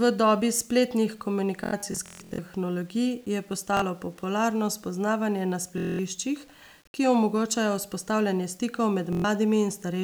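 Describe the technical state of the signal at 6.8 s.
At 6.8 s the speech carries a grainy, gritty distortion that shifts with the level of the voice. It is roughest on quiet passages, where the softest detail sputters or drops out rather than fading smoothly. It is present across the whole clip, not just at this moment. The likely cause is low bit depth without dither. The signal was rounded to a coarse set of steps, consistent with about 8 bits. The rounding error tracks the signal instead of forming a steady hiss, and sits around 35 dB below it.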